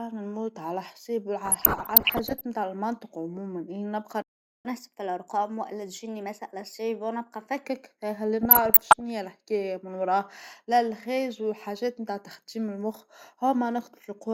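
DAB burbling runs from 1.45 to 2.41 s, ending just before "بتاع المنطق", and returns from 8.43 to 9.01 s, just before "هى الحكاية من وراه". Bit errors on the order of one percent slipped past error correction into the MP2 data. Corrupted samples put short blips of noise in single sub-bands, and corrupted scale factors make sub-bands leap in level for up to a frame, producing blips and level jumps over the speech.

A playback stall at 4.22 s cuts the sound off mid-flow for 0.42 s, until 4.65 s. The player likely ran out of buffered data or had its thread blocked, leaving the output silent until it recovered and resumed.

Catch-up at higher speed follows from 4.65 to 7.65 s. The player resamples its backlog at 1.1 times normal speed to win back some of the lost time, so the speech sounds hurried and raised by about one and a half semitones before settling back to normal.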